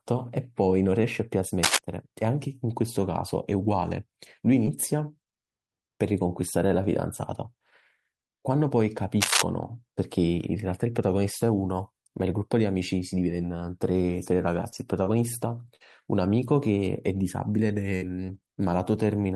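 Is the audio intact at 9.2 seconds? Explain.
No. A worn cable or connector likely shifted, its contact resistance fluctuating, so cable scratch noise, ragged scratching somewhat louder than the speech, covers 9.21 to 9.42 s.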